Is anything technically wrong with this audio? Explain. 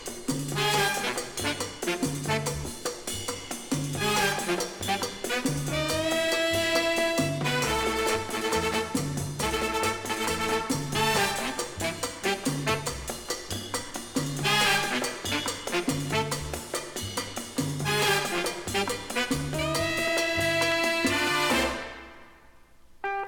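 Yes, compressed frames get skipped at 2.64–2.68 s, 12.74–12.76 s, 15.63 s and 17.27 s. Chunks of roughly 10 to 40 ms, consistent with 10 ms frames, drop out, so the sound jumps ahead.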